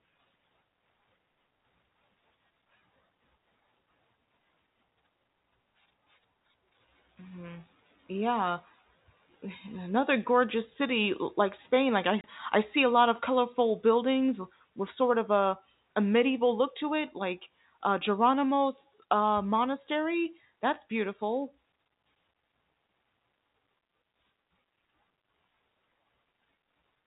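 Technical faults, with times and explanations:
12.21 to 12.24 s, packet loss filled with silence: the speech drops out abruptly for 30 ms, leaving a hard-edged hole. The length fits a single lost packet that the receiver replaced with silence, so the waveform stops mid-cycle.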